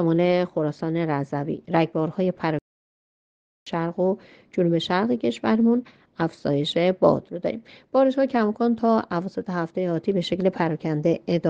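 At 2.59 s the sound cuts out mid-flow until 3.67 s, a playback stall of about 1.08 s, likely from the player running out of buffered data.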